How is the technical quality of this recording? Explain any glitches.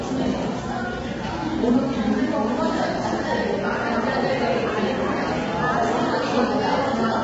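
Heavy low-delay AAC compression runs through the whole clip. The sound is rough and grainy, with noisy fill between tonal parts and nothing above about 7.8 kHz. That's likely AAC-ELD's short frames starved at around 16 kbps, blurring fine frequency detail.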